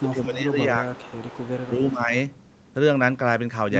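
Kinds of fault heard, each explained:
Echo leak: A faint, delayed copy of the speech trails the original by about 350 ms, once from the start to 0.37 s and again from 0.93 to 1.87 s, sitting roughly 20 to 25 dB below the main voice and a little louder the second time. The likely cause is a loudspeaker on the far end whose echo canceller did not fully remove what its microphone picked up, so that residue travelled back down the line.
Speech suppressed in double talk: The main voice dips in level while the other side is also talking. In the first second it sinks by up to about 15 dB for roughly 0.7 s in total, and between 1.67 and 2.13 s it drops a milder 5 dB or so. This likely comes from an echo canceller that could not tell the local talker apart from the loudspeaker echo and turned both down together.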